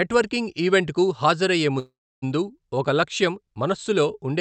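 At 1.79 s, after "ఈవెంట్కు హాజరయ్యే", a call audio freeze holds the speech until 2.24 s. A fading buzz or hiss gives way to 300 ms of silence, then "ఒక లక్ష్యం" resumes intact, 427 ms late. The likely cause is an emptied jitter buffer.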